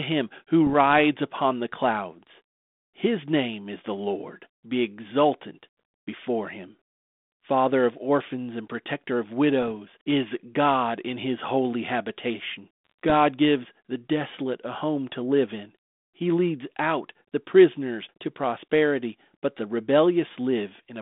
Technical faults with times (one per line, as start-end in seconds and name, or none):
0.66-0.75 bit errors on an ADPCM link
9.62-9.71 bit errors on an ADPCM link
12.85-13.13 bit errors on an ADPCM link